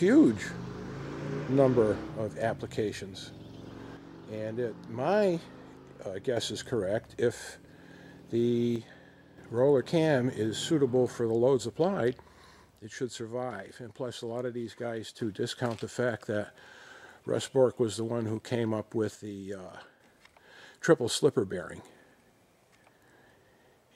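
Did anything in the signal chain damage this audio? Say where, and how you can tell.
Yes. The level drops abruptly by about 6 dB at 3.97–6.37 s, 8.76–9.38 s, 12.79–15.19 s and 19.15–20.00 s, then recovers. One channel drops out, likely from intermittent analogue wiring, leaving the mono sum only half the shared signal.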